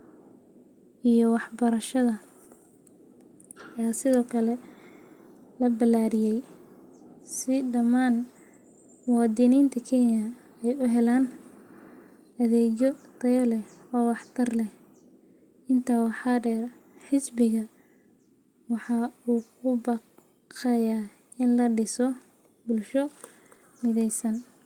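No technical faults detected.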